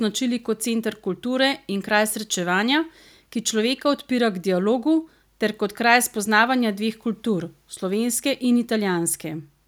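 Nothing in this speech recording stands out as a technical fault, so there's nothing to flag here.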